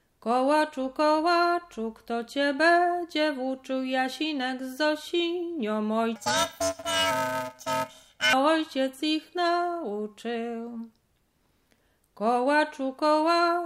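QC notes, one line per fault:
6.16–8.33 s, planar audio read as interleaved: 128-sample channel blocks alternate every 2.67 ms, giving a robotic 375 Hz buzz; spectrogram shows 375 Hz-spaced comb, waveform visibly chopped.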